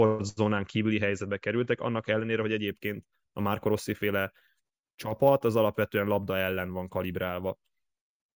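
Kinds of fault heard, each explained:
Imaging from sample-and-hold upsampling: from about 2.68 s to 8.26 s, the speech picks up a bright, metallic fizz that rises and falls with the talking. Each sample was simply repeated with no smoothing filter, which fits 16 kHz audio raised to 48 kHz. That leaves mirrored copies of the speech spectrum, the lowest sitting in the 8 to 16 kHz band and running opposite to the pitch, at about 22 dB below the speech.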